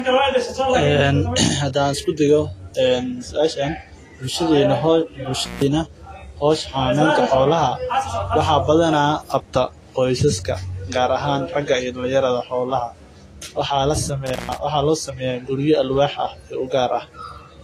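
Throughout the speech, nothing exists above 14.2 kHz, and on a spectrogram that shows as a flat, hard ceiling with smeared, watery detail beneath it. This is likely low-bitrate audio saved at a high bitrate: the MP3 file's generous size cannot restore what an earlier, much leaner encoding, consistent with roughly 33 kbit/s Vorbis, discarded.

From 5.39 to 5.63 s, and again from 14.26 to 14.56 s, an intermittent contact briefly opens the signal path, for about 158 ms and then 136 ms. The sound drops to faint hiss between crackly edges. The waveform collapses to a thin band flanked by sharp spikes, and the spectrogram shows broadband vertical streaks.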